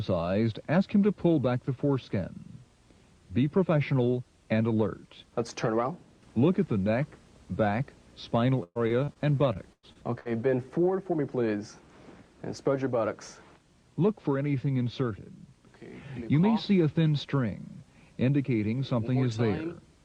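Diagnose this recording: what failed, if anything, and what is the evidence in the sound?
The network failed, producing repeated packet loss with a robotic sound across two bursts, 8.63 to 9.17 s and 9.53 to 10.27 s. In each burst the audio turns choppy as successive holes, up to about 120 ms and 100 ms long, are patched by stretching the preceding sound; roughly a third and a quarter of each span is concealed. Plain dropouts would leave silent gaps, and codec starvation would blur the sound continuously, whereas here clean audio alternates with synthetic repeats.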